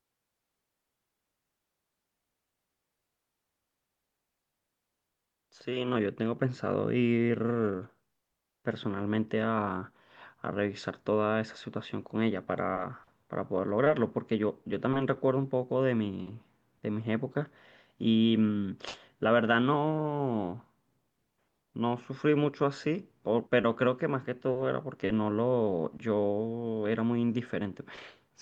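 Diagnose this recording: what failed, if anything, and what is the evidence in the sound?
Nothing failed here; no stage from capture to playback leaves an audible fault at any point in the speech.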